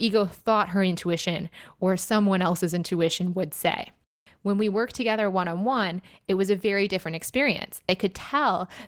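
Speech recording, no technical faults detected anywhere in it.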